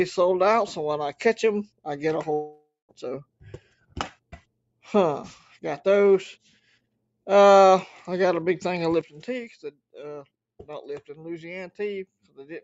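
From 2.33 to 2.95 s there is a long network dropout, most likely from packets failing to arrive. The last sound is stretched into a fading buzz, then about 0.2 s of silence follows, and the audio resumes with that stretch missing. On a spectrogram it shows as smeared, decaying bands and then an empty gap.

Between 3.25 and 3.97 s, sound is cut by the noise suppressor, which treats it as noise and pulls it down by up to about 18 dB across roughly 0.4 s. Sustained parts and decays sink and end early. The waveform envelope dips sharply and the spectrogram thins, while the 8 kHz band limit of the call path stays unchanged.

At 9.01 s a sudden gain jump drops the level by about 10 dB and holds it there to the end, likely because a digital gain change was applied without a ramp. Sound and background noise fall together at once. The waveform shows a clean, instant step down in amplitude.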